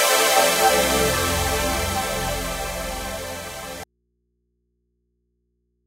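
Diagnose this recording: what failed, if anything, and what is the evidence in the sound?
An audio dropout to a faint residue at 3.84 s: the sound cuts off abruptly and does not return, leaving only mains hum about 50 dB below the signal. That points to the analogue wiring, likely a connection breaking while the input stayed live.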